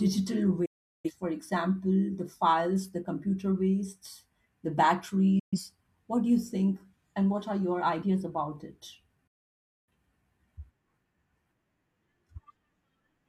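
Speech marred by digital broadcast dropout: the receiver lost valid frames and muted until good ones returned, so the sound fades out within about 8 ms and vanishes at 0.65–1.11 s, 5.39–5.59 s and 9.27–9.91 s, with that programme lost rather than delayed.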